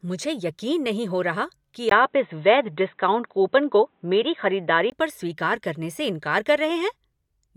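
The input likely switched to a poorer device from 1.89 to 4.92 s, after "नहीं हो रहा कि". A 20 ms gap follows, then the speech turns dull and boxy, with nothing above 4 kHz.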